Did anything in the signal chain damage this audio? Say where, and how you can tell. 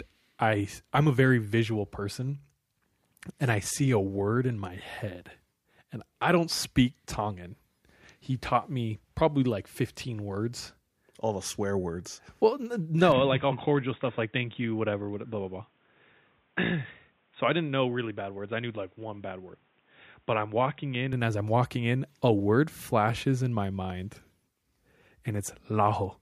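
Yes. From 13.12 to 21.13 s the speech goes dull, slightly quieter, cut above 3.8 kHz with faint new background noise: likely input switched to a poorer device.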